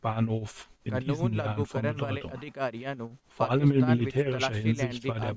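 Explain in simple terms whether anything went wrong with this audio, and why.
Something did go wrong, and it runs through the whole clip: an overlap-add ripple. The speech was chopped into overlapping chunks and stitched back together, but the overlaps don't add up to an even level. So the loudness pumps up and down about seven times a second, from the first moment to the last, giving the voice a shaky, rough wobble. The dips are quite deep.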